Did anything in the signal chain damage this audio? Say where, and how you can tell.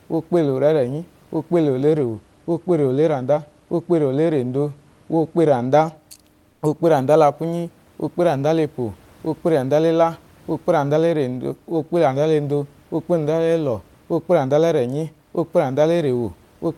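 Yes, at the codec stage: from 6.52 to 6.62 s, about 100 ms, the real room noise, sitting about 42 dB below the loudest speech, is replaced by comfort noise in place of the background. That stretch is a smooth, featureless hiss, about 3 dB quieter, with none of the room's texture. The likely cause is Opus DTX, where the sender pauses transmission and the receiver synthesises shaped noise. A noise gate would leave near-silence rather than substitute noise, and packet loss would sound abrupt or warbly.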